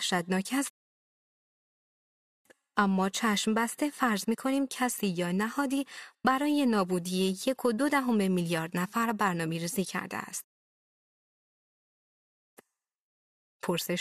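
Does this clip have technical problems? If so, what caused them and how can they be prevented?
Yes. The speech halts twice in a rebuffering stall: silence runs from 0.70 to 2.45 s, adding about 1.75 s, and again from 10.44 to 12.57 s, adding about 2.13 s. Each time the player drained its buffer of downloaded audio, waited for more data, then resumed at the exact point it stopped, so nothing is skipped but the timeline stretches. Prevent it with a larger playback buffer and adaptive bitrate switching that drops quality before the buffer empties.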